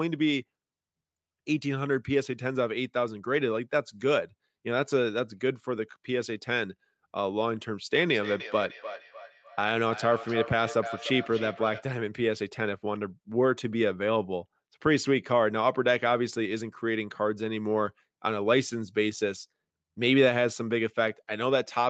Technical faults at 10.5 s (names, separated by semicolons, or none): feedback echo between two devices